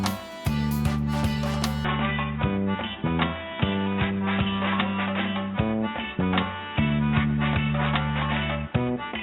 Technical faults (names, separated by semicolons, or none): input switched to a poorer device